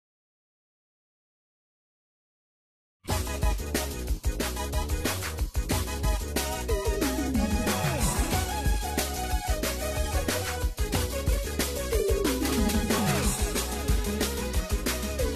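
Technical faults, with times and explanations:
Nothing stood out on listening to this recording.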